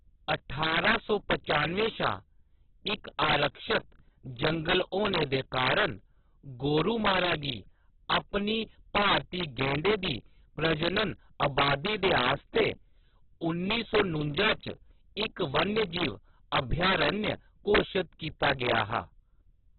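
Integer overflow runs through the whole speech clip. The signal is driven about 8 dB past the top of the integer range, and instead of being held at the limit, every sample beyond it wraps to the opposite extreme. Only a small share of samples, around one percent, cross that line, but each one jumps across the full range. On louder syllables this produces sudden, violent cracks, far harsher and more abrupt than ordinary clipping.

Heavy codec damage is also present from start to finish, with a muffled, boxed-in sound and nothing above 4.2 kHz. The likely cause is Opus compression at a very low rate, consistent with about 8 kbps in a narrowband setting. The damage has the texture of the music-oriented mode: starved bands are filled in rather than left empty, so the speech sounds grainy, rough and noisy instead of swirling.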